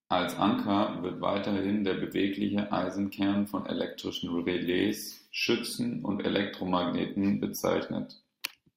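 No technical faults are audible in this speech recording.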